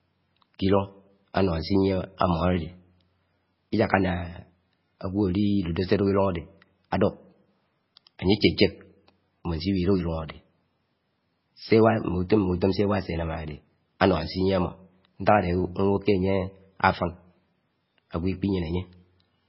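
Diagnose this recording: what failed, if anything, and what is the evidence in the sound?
Codec stage, likely MP3 compression starved of bits, fitting about 16 kbps: the treble is cut off at 5.6 kHz, and the speech swirls heavily throughout.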